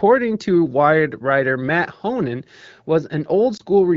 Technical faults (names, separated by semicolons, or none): lost AMR speech frames